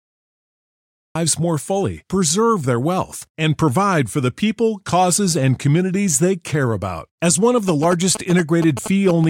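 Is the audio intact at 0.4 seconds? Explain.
No, 0.4 seconds falls inside a cut-off start spanning 0.00 to 1.15 s: capture began late, leaving digital silence until speech bursts in mid-sound at "more fully preserve their".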